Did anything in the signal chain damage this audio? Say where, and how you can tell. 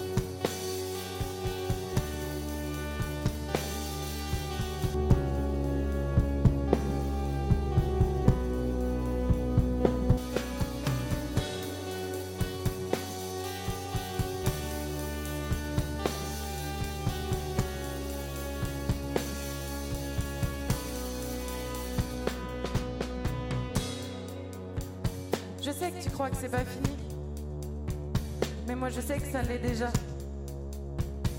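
Yes. De-emphasis was applied wrongly at the playback stage from 4.95 to 10.17 s: an unneeded treble-cut filter dulls the sound, about 11 dB down at 10 kHz, and the spectrogram's upper bands fade smoothly.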